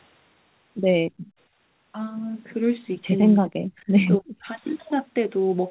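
From 1.09 to 1.38 s the room background is gated by the echo canceller. While the far end's audio plays through the loudspeaker, the canceller treats everything at the microphone as echo and pulls the level down hard, by about 39 dB at its deepest, for roughly a third of a second. The background ambience drops away and then returns. A waveform shows the noise floor collapsing almost to a flat line, and a spectrogram shows a near-empty vertical band across all frequencies.

Speech then dips twice, from 3.31 to 3.70 s and again from 4.20 to 4.47 s, most likely speech suppressed in double talk. Here the canceller can no longer tell the near talker from the loudspeaker echo and turns both down. The first dip goes as deep as about 40 dB and the second about 30 dB, so the speech drops in level. In a spectrogram the harmonics fade below the band edge, and the waveform envelope sinks in those spans. 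Throughout the clip nothing reaches above 4 kHz, which fits narrowband G.711 telephony.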